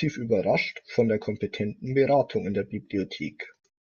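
No technical faults can be heard anywhere in the speech. There is nothing to place in time order.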